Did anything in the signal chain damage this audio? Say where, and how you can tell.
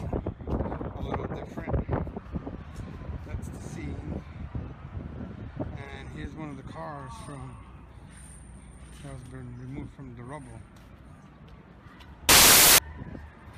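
Yes: at sample-format conversion, samples built from the wrong bytes, misassembled with the low bits made dominant, turn 12.29 to 12.78 s into loud, harsh broadband noise.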